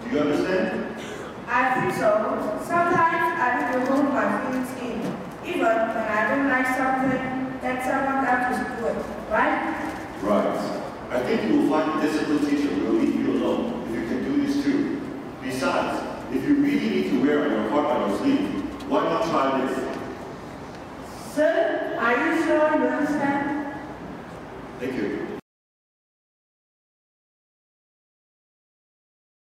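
Nothing goes wrong anywhere in this one; there's no glitch, dropout or hiccup to point to at any moment in the audio.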